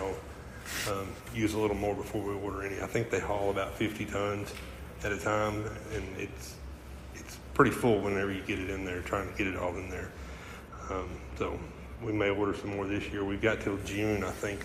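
From 10.68 s to 13.8 s the top end falls away: de-emphasis applied wrongly. A treble-cut curve intended to reverse pre-emphasis has been put on material that carried no such boost, or has been applied a second time. The response tilts down smoothly with rising frequency, reaching about 8 dB of loss at 10 kHz relative to 1 kHz. Across that stretch the audio turns dull and muffled, with detail and air reduced.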